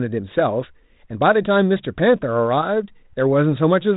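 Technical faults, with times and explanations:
No technical faults are present; the speech comes through G.726 ADPCM telephone coding at 32 kbit/s, which leaves only light coding texture and no content above 3.8 kHz.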